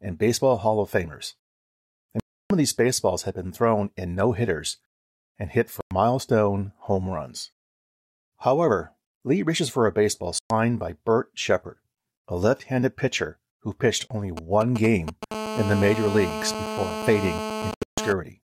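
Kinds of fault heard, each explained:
Bluetooth dropout: at 2.20, 5.81 (after "no hitters and hit"), 10.39 (after "reaches for a baseball"), 14.08 (after "handed pitcher who pitched") and 17.71 s, the speech cuts to silence for 0.03 to 0.3 s, then resumes further along. The likely cause is late wireless packets. The last hole is split into separate gaps.
GSM signalling bursts: from 14.37 to 15.32 s a galloping dit-dit-dit of brief 217 Hz buzzes sits about 5 dB below the speech. A nearby 2G phone sends short groups of radio bursts, and the audio circuitry rectifies them into audible pulses.
GSM phone buzz: from 15.32 to 18.13 s a hard, raspy 217 Hz buzz full of harmonics runs steadily about 7 dB below the speech. The phone has moved into a call, transmitting 217 bursts per second, and each burst is rectified into the audio path.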